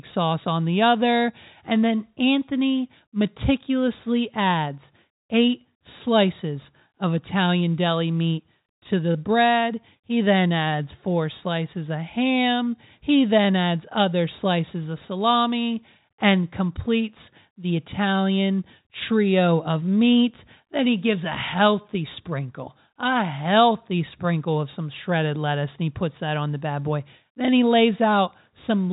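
Nothing's actually wrong with this speech recording: it's ordinary G.711 telephone audio, so everything above about 3.8 kHz is gone and the top end sounds like a phone call, and there are no faults.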